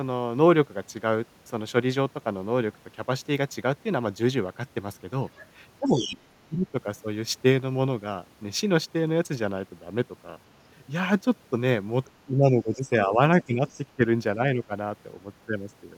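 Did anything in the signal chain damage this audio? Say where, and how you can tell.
Yes. A second, fainter voice leaks in under the talker from 5.36 to 6.18 s, about 10 dB down. There is a brief scrap at 12.05 to 12.1 s, and another from 13.42 to 13.82 s at about 25 dB down. This is other side's voice leaking through at the call-processing stage, likely loudspeaker echo that the echo canceller left in the microphone signal.

The talker's own voice dips in pieces from 5.8 to 6.75 s, sinking by as much as about 20 dB, and again across 12.26 to 14.72 s by about 10 dB, roughly a second in total. That is speech suppressed in double talk, likely the echo canceller attenuating everything while both sides spoke.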